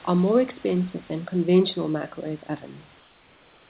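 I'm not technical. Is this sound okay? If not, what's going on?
No. From 3.0 s to the end at 3.7 s, the real background is replaced by comfort noise: a smooth, even hiss, slightly quieter than before, with none of the room's natural detail. This is likely because the call stopped sending audio once the speaking ended, and the receiving side filled the gap with made-up noise. Unlike a dropout, which goes silent or clicks, the sound never disappears. It just becomes flat and artificial.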